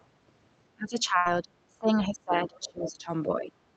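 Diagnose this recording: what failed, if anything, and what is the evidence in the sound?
The echo canceller in the call processing stage let some of the far end through. There's a faint scrap right at the start, 0.0 to 0.04 s, about 40 dB under the talker. A more noticeable stretch runs from 2.56 to 2.86 s, about 25 dB down. That's the other side's voice leaking through, most likely because the loudspeaker's sound reached the mic and the canceller's residual suppression didn't fully strip it out.

The same call processing stage also bites the near talker in three places. From 0.75 to 1.52 s the level sags by about 20 dB. From 1.68 to 3.11 s it drops hardest, around 30 dB. From 3.27 to 3.52 s there's a lighter dip of about 10 dB. That's speech suppressed in double talk: with both ends talking, the suppressor likely couldn't tell echo from the local voice, so it ducked everything.

On the network side there's a burst of packet loss from 1.17 to 1.27 s, inside that first suppressed stretch. 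Roughly the first 80 ms is concealment, where the decoder stretches the last sound and fades it into a buzz or hiss. The audio then picks up about 80 ms further along, so that chunk is simply gone. The surrounding Opus audio tops out around 8 kHz, which points to a wideband setting near 32 kbps.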